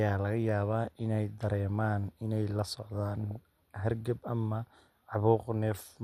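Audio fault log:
Throughout: MP2 compression. The speech sounds dull and gurgly, with a grainy edge and the top end fading in and out. That's the sound of a codec that's short on bits, likely MP2 at something like 80 kbps. With too few bits the upper sub-bands get switched off entirely, and the bands that survive are quantised so coarsely that the texture turns granular.
2.69–3.37 s and 5.71–5.84 s: DAB burbling. Both stretches break into short blips of noise on top of the speech. The first runs about two-thirds of a second, and the second is a brief blip near the end. Bit errors got past the error correction into the MP2 data, so wrong samples put short blips of noise into single sub-bands. The first stretch fits a few dozen damaged frames at an error rate of a fraction of a percent. The second fits half a dozen frames at a somewhat higher rate.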